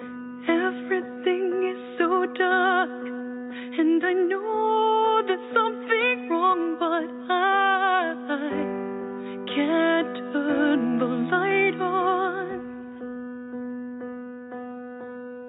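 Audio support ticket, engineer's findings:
No audible fault found; signal path checked by ear, nothing to report.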